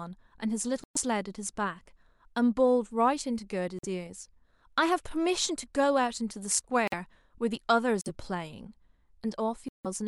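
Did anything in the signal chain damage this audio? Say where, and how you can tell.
Yes, the damage comes from the codec decoding stage, as corrupt frame muted. The speech drops to dead silence at 0.84–0.97 s, 3.79–3.85 s, 6.88–6.94 s, 8.01–8.09 s and 9.69–9.86 s. Each gap cuts in abruptly, and its length points to a few whole codec frames. The surrounding timing stays intact. Bit-damaged frames were rejected by the decoder, and the player substituted silence. A spectrogram shows full-band blank columns with hard vertical edges, and the waveform goes flat.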